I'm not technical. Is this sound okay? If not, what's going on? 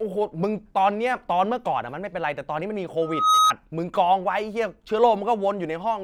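No. Between about 3.02 and 3.53 seconds there is a loudspeaker feedback squeal. The microphone picked up the sound coming out of its own loudspeaker, fed it back in, and one pitch kept getting louder around that loop. You hear it as a single high whistle near 1.3 kHz that swells over roughly a third of a second until it is a little louder than the speech, then stops.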